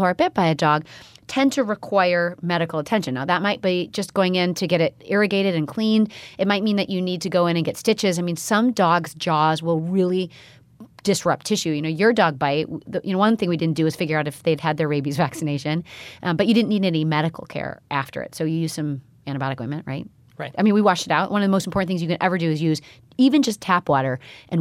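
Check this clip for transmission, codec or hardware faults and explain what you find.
No faults detected here.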